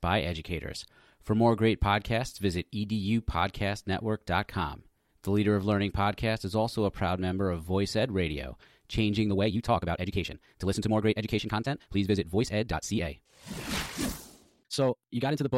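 From 9.24 s onward, a time-stretched section plays 1.69 times faster, likely from software squeezing. The speech sounds rushed, with syllables crowded on the spectrogram and pitch unchanged.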